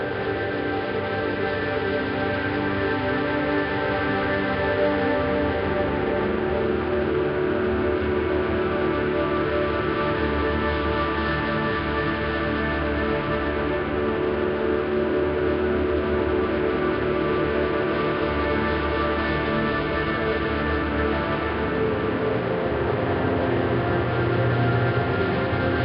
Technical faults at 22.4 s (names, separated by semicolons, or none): none